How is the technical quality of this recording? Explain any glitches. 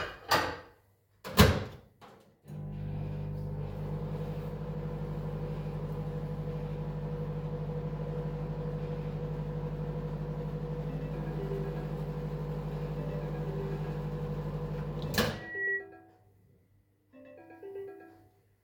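The recording has one clear fault, a loudspeaker feedback squeal from 15.33 to 15.87 s. A microphone is picking up its own loudspeaker, and at 1.9 kHz the loop gain passes unity. That single tone swells over roughly a third of a second until it sits a few decibels above the rest of the audio.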